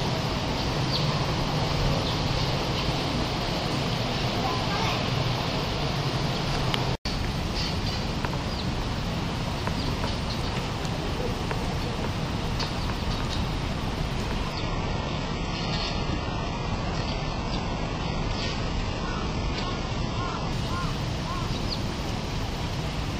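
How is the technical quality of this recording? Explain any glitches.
Technical quality falls for one stretch, from 14.53 s to 20.53 s, where an adaptive stream at a lower bitrate takes over. The connection slowed, so the player switched to a much leaner encoding, which fits a drop from around 96 kbit/s AAC to a very low-rate HE-AAC stream, and back again six seconds later. Everything above 8 kHz vanishes, and the sound turns dull with added codec artefacts. On a spectrogram, energy stops at a hard 8 kHz ceiling, with abrupt edges at both ends. The waveform shows no gap.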